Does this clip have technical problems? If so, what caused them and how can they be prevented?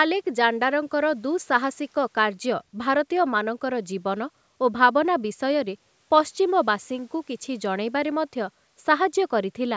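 No, there are no technical problems in this speech clip; the band ending at 8 kHz and the trimmed lowest bass come from ordinary call microphone processing.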